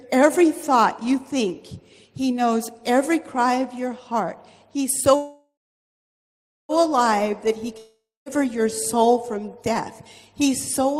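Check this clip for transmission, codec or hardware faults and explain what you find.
Two transmission faults stand out, both from the network path rather than the codec or hardware.

From 5.15 to 6.72 s there is a call audio freeze. The sound stops advancing and its last moment is stretched into a fading buzz for about 1.5 s, with roughly the final 1.2 s of that silent. This was likely caused by packets being held up in transit, which left the jitter buffer empty and forced the receiver to improvise until they arrived. What separates this from a dropout is that nothing is skipped. The audio resumes exactly where it halted, so everything after it plays about 1.5 s later than before.

From 7.78 to 8.29 s there is a long network dropout. It begins the same way, with the last sound smeared into a decaying hiss for about half a second, the second half of it silent. When the audio returns it has jumped ahead. 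About 0.48 s of material is simply gone, so the sound picks up mid-stream, likely because those packets never arrived at all. That missing stretch is the difference from the earlier freeze, which only delayed the audio without losing any of it.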